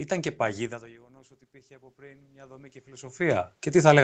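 From 1.06 s, just after "και παγίδα το", the automatic gain rises. The input level fell by about 24 dB. The automatic gain control heard this as too quiet and began raising its gain. It does this slowly, so the sound climbs back over the following seconds, right to the end. The room noise swells along with the speech, because the gain lifts everything equally. The sound stays band-limited at 8 kHz throughout, as the call codec passes it.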